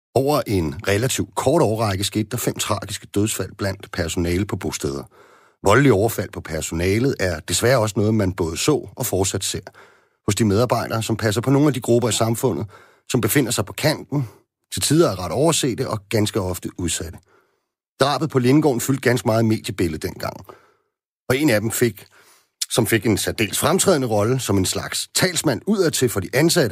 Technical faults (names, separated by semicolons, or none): none